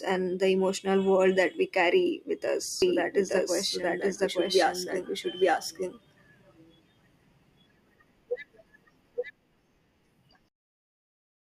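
A speech recording with a doubled audio track from 2.82 s to 9.30 s: a second full-band copy of the speech runs about a second behind the original, at roughly the same loudness. The copy carries no decay or added room sound, and it cuts in and out abruptly at those two points. This is likely due to the signal being captured twice, once through a slower path, or to an edit leaving two offset copies in the mix.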